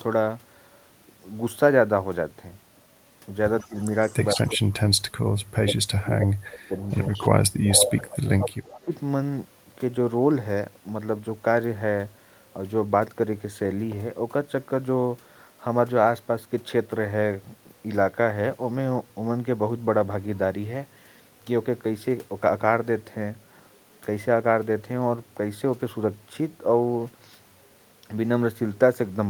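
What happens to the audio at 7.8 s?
At 7.8 s there is an echo leak, from 7.69 to 8.29 s. The likely cause is a far-end echo canceller that failed to remove the loudspeaker sound its microphone picked up, so that sound was sent back down the line. The result is a second copy of the speech trailing the original by about 149 ms, only slightly quieter than the direct sound, giving a brief doubled, smeared quality before it drops away.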